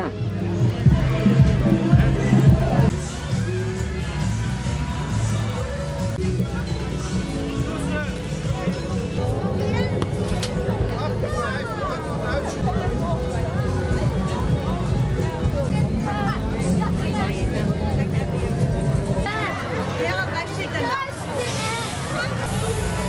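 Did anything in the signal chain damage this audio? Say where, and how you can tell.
Yes. A resampler restarted on every block, throughout the clip, in the sample-rate conversion stage. A steady tick train at 10 Hz sits on the sound, 100 ms apart, and is present only while there is signal. The converter handled each block in isolation and lacked the real neighbouring samples at its edges, so every boundary leaves a small error. The spacing points to 100 ms blocks in what sounds like a 24 kHz to 48 kHz upsampling.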